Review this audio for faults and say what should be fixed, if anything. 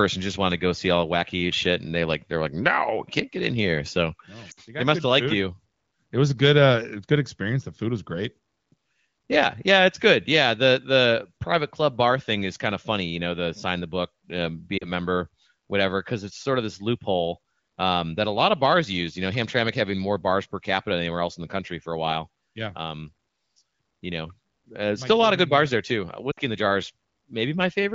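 Brief dropouts to near silence at 4.51–4.60, 14.77–14.87 and 26.32–26.40 s come from lost AMR speech frames: the decoder extrapolated the last good frame for roughly 40–60 ms at fading gain, consistent with two or three 20 ms frames dropped. Better radio coverage or stronger channel error protection would keep those frames intact.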